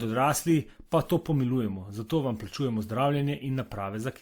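From start to finish the speech carries two overlapping kinds of coding artefact rather than one consistent texture, the mark of transcoding between lossy codecs, likely WMA at 96 kbit/s followed by Opus at 32 kbit/s. The second encoder spends its bits on the first one's smearing and adds its own. Unlike a single low-bitrate pass, mixed artefact types sit together, while the top end stops at about 20.3 kHz.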